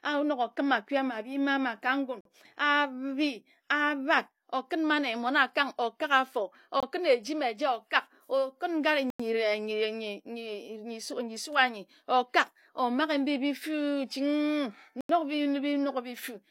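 Four times the program likely failed to fill its output buffer in time, and each missing block became a block of digital silence: at 2.21 s for 46 ms, at 6.80 s for 23 ms, at 9.10 s for 93 ms, and at 15.01 s for 86 ms. The lengths fit buffers of 2048, 1024 and 4096 samples. The speech drops to silence and returns with no fade. Each gap is heard as a short hole.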